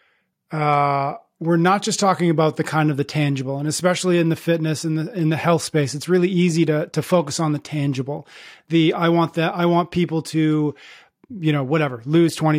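A recording of speech, with no technical fault to be heard anywhere in it. Nothing in the audio needs a time or a cause.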